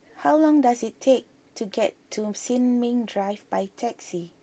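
Nothing stood out on listening to this speech clip.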